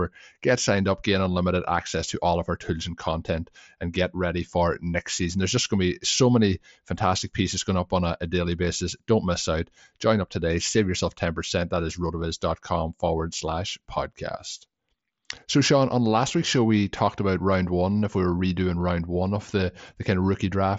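No faults in the speech; the mSBC Bluetooth headset codec path behaves as designed, with nothing above about 7.7 kHz and a light grain on louder passages.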